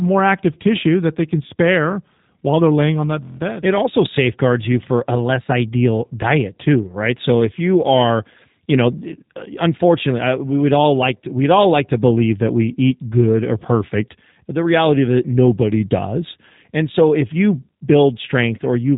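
From start to finish the speech carries G.729 codec damage, and it is plainly audible. The coder models each short frame as a vocal tract filter excited by a pitch predictor and a few sparse pulses. Everything outside that model is discarded, leaving a rough, slightly synthetic texture that fits an 8 kbit/s stream, most likely the G.729A variant. The spectrum also stops near 3.8 kHz, so sibilants and breath sound dull and narrowband.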